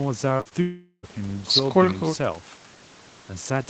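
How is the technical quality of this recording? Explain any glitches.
The recording has clear network trouble near the start: a quick run of small packet-loss glitches, then one longer gap. The top end stops at about 8 kHz, which is normal for an Opus call at this bandwidth.

Short concealed packet loss hits at 0.37–0.41 s, 0.41–0.47 s and 0.49–0.53 s, each losing roughly 20 to 40 ms. The decoder didn't get those packets in time, so it carried the previous sound forward to cover each hole and then eased back into the real signal. You hear it as a quick smear or wobble, and a brief consonant in there can just disappear.

Right after that, from 0.61 s to 1.05 s, there's a stretch of about 0.42 s where the real audio is gone. The last sound gets stretched out as a fading buzz or hiss, with roughly 50 ms of near-silence near the end before the real signal returns, minus whatever fell in the gap. 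That pattern is most likely a long network dropout, with the receiver padding the hole until packets started arriving again.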